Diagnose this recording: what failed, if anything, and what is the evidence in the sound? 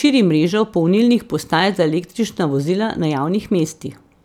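Nothing failed in this recording, and the sound gives no evidence of a fault at any stage.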